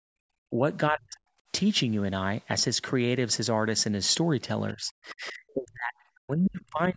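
Right from the start, 0.00 to 0.21 s, the room tone gets yanked down by about 29 dB. That's background gated by the echo canceller: it clamped the mic while the far end was playing. It does it again, more gently, around 1.45 to 1.50 s, with a dip of about 16 dB.

In between, the talker's own speech gets squashed, likely speech suppressed in double talk, with both ends talking and the canceller ducking everything. There's a brief, fairly deep dip at 0.49 to 0.54 s, then a heavier one from 0.90 to 1.17 s that nearly cuts the sound out. From 4.73 s to the end at 6.96 s it keeps pumping, with about a second and a half of the speech chopped and pulled well down.

Inside that last stretch, at 6.46 to 6.50 s, a quick scrap of the other side's voice leaks through, sitting well under the talker. The canceller likely didn't fully remove the loudspeaker echo there.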